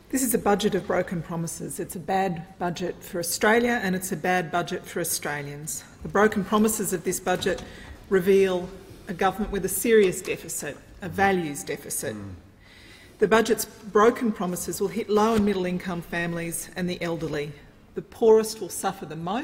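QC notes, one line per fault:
No faults heard anywhere in the audio.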